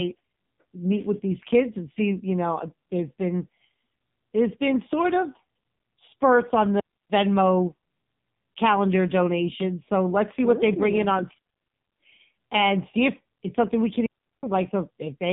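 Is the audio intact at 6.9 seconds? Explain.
No. At 6.9 seconds you're right inside a digital wireless dropout that runs from about 6.80 to 7.10 s. The receiver lost too much data from the link and muted for roughly 300 ms rather than play garbage, fading down and back up so quickly that you just get a clean hole of near silence. There's no crackle or noise burst on either side of the gap, which is what gives it away as a deliberate mute and not interference.

The AMR narrowband mobile codec is also there, running through the whole clip. Everything above 3.8 kHz is gone, so the speech is boxed into that thin phone-line band. The codec models the voice as a vocal-tract filter driven by a few pulses per 5 ms slice of each 20 ms frame. The damage is heavy, with a buzzy, synthetic edge that fits a low bitrate around 5.9 kbps.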